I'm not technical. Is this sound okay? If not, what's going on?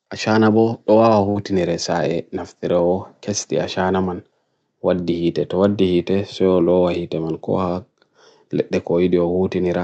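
No. A burst of packet loss hits at about 1.29 s. Pieces of the call's audio failed to arrive in time, so for roughly 60 ms the receiving end stretched the last bit of sound and faded it out. Then the audio jumps ahead, skipping about 60 ms.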